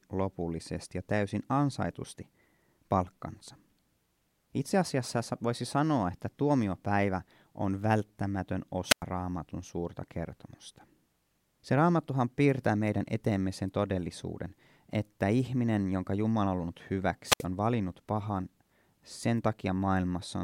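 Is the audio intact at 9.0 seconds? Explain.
No. At 9.0 s the wireless microphone's radio signal fades until the receiver's squelch mutes its output, a wireless microphone squelch dropout from 8.89 to 9.03 s. After "että tuomiopäivä on välttämätön", a brief rise of hiss precedes a 99 ms hole of near silence before "raamatun suurta kertomusta".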